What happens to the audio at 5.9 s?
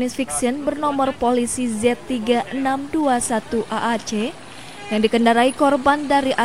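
Nothing goes wrong at 5.9 s; the audio plays through that moment intact.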